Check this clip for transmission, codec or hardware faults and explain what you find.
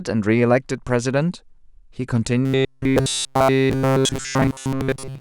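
One fault is present. From 2.45 s to the end at 5.21 s, the speech turns into a rigid, metallic buzz that still loosely tracks the words, with a fixed pitch near 133 Hz. This is robotic sound from repeated short buffers, likely caused by audio arriving too slowly so that the last fragment is replayed to fill the gaps. Essentially all of that stretch is repeated material, and a 133 Hz buzz fits a buffer about 7.5 ms long.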